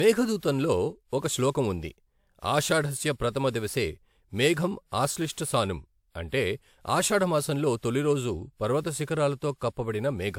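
Speech, likely passed through a WMA encoder about four times at what sounds like 128 kbit/s, causing generation loss throughout: swirly, hollow smearing, blurred attacks, nothing above 20.1 kHz.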